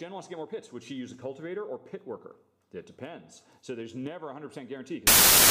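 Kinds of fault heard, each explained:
Samples built from the wrong bytes: from about 5.07 s to the end at 5.5 s, the sound turns into loud, harsh broadband noise because each sample is assembled from misaligned or swapped bytes, so the rapidly changing low-order bits end up as the dominant part of every value. Unlike added background hiss, which sits under the material at a steady level, this replaces the audio outright.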